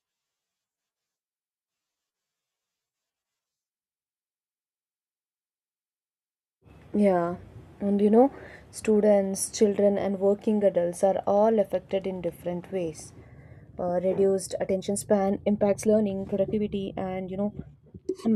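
From 14.64 s to the end, the speech turns rushed at unchanged pitch, a time-stretched section likely squeezed to 1.4x speed by dropping short pieces.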